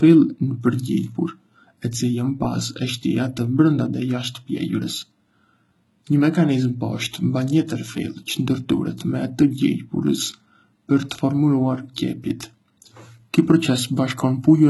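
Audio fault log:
Throughout, HE-AAC compression: the speech has a bright but synthetic-sounding top end that stops dead at 11.8 kHz, and s sounds come out gritty and lispy. This is likely heavy HE-AAC coding at a bitrate that fits roughly 16 kbps. Only the lower spectrum is actually coded, and the treble is rebuilt by copying lower bands upward under a coarse envelope, so the upper harmonics no longer line up with the real ones and the sibilants turn metallic.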